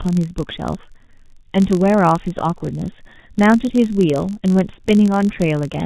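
From start to finish the speech has been through the G.723.1 codec, heavily damaged, in what sounds like its 6.3 kbit/s mode. Its slow voice model and hard cut-off near 4 kHz leave the voice muffled and hoarse, with consonants smeared.

Also throughout, a filter restarted on every block resets its memory at each block boundary, consistent with 512-sample blocks. Each restart leaves a small click, and together they form a steady 46.9 Hz buzz that rises and falls with the speech level.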